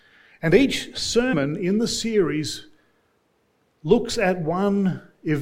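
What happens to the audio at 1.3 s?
At 1.32 s you've got compressed frames skipped: a handful of frames never got played, so the audio jumps ahead by roughly a tenth of a second, which points to around four 21.3 ms frames. You hear the audio jump ahead abruptly at that join.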